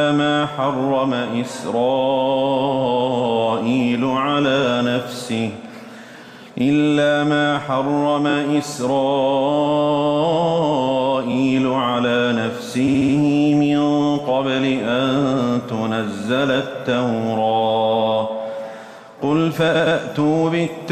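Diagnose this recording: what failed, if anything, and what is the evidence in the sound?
Repeated frames at the codec or storage stage: runs of compressed frames were replayed, causing stutters at 6.27–6.41, 8.29–8.34, 12.87–13.14 and 19.74–19.97 s. Blocks of 69.7, 23.2, 69.7 and 116.1 ms loop two or four extra times, lengthening the audio.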